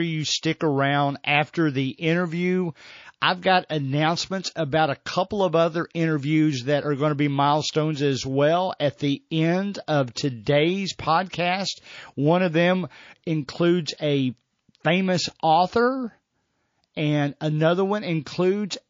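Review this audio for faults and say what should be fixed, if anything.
The speech has a watery, swirly quality throughout, with the s sounds chirping metallically, so this is likely MP3 compression at a low bitrate; the damage is plainly audible and fits roughly a 32 kbps encode. Starved of bits, the encoder zeroes quiet frequency lines that flicker frame to frame. To avoid it, keep a lossless or much higher-bitrate source and encode from that.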